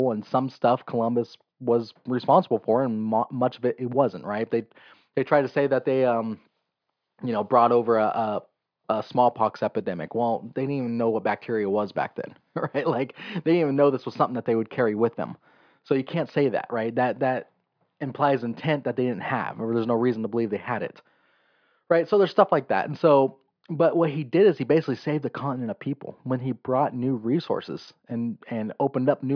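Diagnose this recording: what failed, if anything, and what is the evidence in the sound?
Listening to the speech in this recording, nothing stood out as having gone wrong at any stage of the chain.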